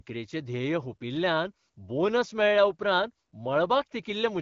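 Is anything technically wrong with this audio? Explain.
No, nothing is technically wrong: the speech comes through the AMR wideband (HD Voice) codec at 12.65 kbit/s, where coding damage stays light, and no faults are present.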